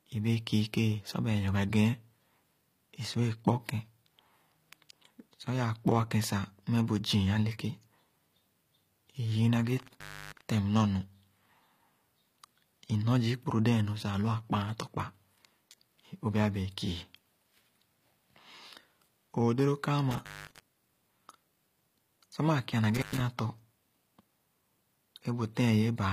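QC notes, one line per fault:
Throughout, HE-AAC compression: the treble is bright but synthetic and nothing reaches above 15.5 kHz, so s sounds come out gritty and lispy. This is likely band replication at a low bitrate, around 24 kbps, where upper bands are copied from lower ones and their harmonics misalign.
9.77–10.51 s, 20.11–20.60 s, 22.95–23.20 s, intermittent contact: the sound drops out for about 320 ms, 206 ms and 104 ms, with crackle at each edge and faint hiss in the gaps, as a loose connection briefly opens the line.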